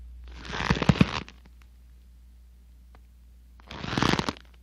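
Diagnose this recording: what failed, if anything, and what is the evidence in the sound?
The codec stage failed, with damaged data in a compressed stream. Two brief disruptions occur, at 2.04 s and 4.34 s. Each is a corrupted stretch of encoded data. The decoder misread those frames, lost sync and searched for the next valid frame header before resuming.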